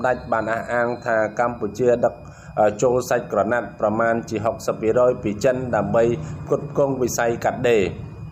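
A thin, high whistle sits under the sound for its whole length, wavering between about 2.44 and 2.49 kHz, roughly 40 dB below the main signal. This is switching supply whistle. A switching power supply feeding the recording chain is cycling in an audible burst mode or beating against another supply, and its switching energy leaks into the audio. The pitch shifts within that narrow band as the supply's load changes.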